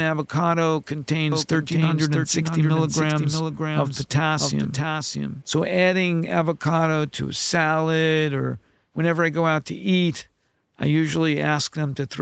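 Speech clip sent over a call, its top end stopping near 8 kHz as a wideband call codec leaves it. A doubled audio track, likely from a slower second capture path, adds a dry copy about 0.7 s late and about 5 dB quieter, cutting in abruptly at 1.32 s and out at 5.42 s.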